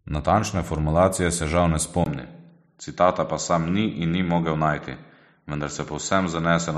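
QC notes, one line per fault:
2.04 to 6.78 s, input switched to a poorer device: right after "formulacije se žal ne" a 20 ms gap, then the band stops at 7.6 kHz with a new quiet noise floor, likely a change to another input.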